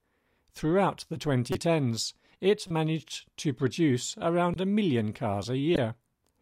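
Speech with four short chirpy blips, each about 30 ms, at 1.52–1.56, 2.68–2.71, 4.54–4.56 and 5.75–5.78 s. They're corrupt frames decoded: flipped bits in the compressed stream got played anyway, so misread gains and codes put energy where it doesn't belong. Each lasts roughly one or two frames. The one at 5.75 s is the loudest, around −10 dBFS, and the one at 2.68 s is the quietest, near −25 dBFS.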